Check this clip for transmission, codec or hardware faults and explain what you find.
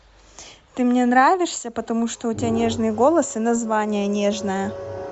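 Two faults are present: codec coloration across the whole speech clip and one brief frame loss.

Throughout, the speech has a breathy, grainy upper edge, plainly audible, likely from Bluetooth LC3 compression at a rate that fits 48 kbps. The codec discards much of the high spectrum and refills it with noise. A spectrogram shows smeared, noise-like texture above the harmonics.

At 0.67 s, lost LE Audio frames leave a 7.5 ms gap, which fits one lost LC3 frame. The decoder fills it by repeating the previous spectrum with randomised signs, producing a tiny rough blip. On a spectrogram it appears as a short noisy vertical stripe.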